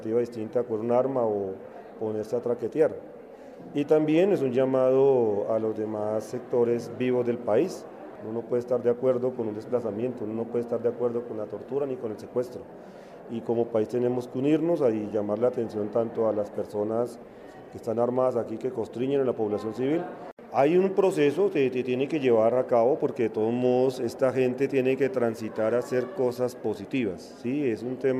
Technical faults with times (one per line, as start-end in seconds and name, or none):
none